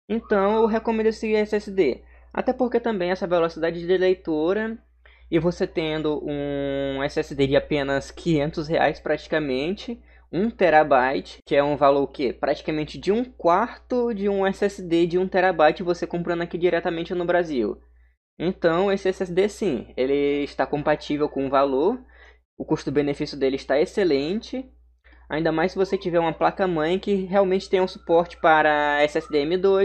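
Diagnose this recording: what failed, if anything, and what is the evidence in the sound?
Nothing failed; no faults detected.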